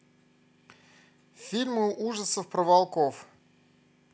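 Speech recording with no audible technical faults at any point.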